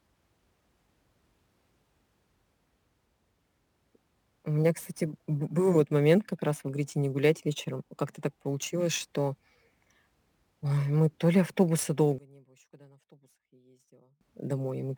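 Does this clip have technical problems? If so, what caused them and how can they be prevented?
Yes, two. The first is sample clock jitter, and it runs through the whole clip. The converter's clock wanders, so each sample lands a little early or late. On steep parts of the waveform that timing slop turns into level error, here sitting roughly 30 dB below the speech, which fits jitter somewhere around 7 microseconds. You hear it as a gritty hiss riding on louder, brighter syllables and dropping away in the pauses. To prevent it, record with a converter that has a clean, stable clock, or lock it to a good external word clock.

The second is a drop-out from 12.18 to 14.21 s, right after "мы то ли автобуса". The speech falls by about 27 dB to a faint copy, the signature of a mono sum with one channel inverted. Flip one side's polarity and everything the two channels share cancels, so the centred voice nearly disappears and only the small difference between the channels survives. 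The likely cause is a polarity flip on one leg of the stereo path for that stretch. To prevent it, check polarity on both channels and monitor in mono before printing the mix.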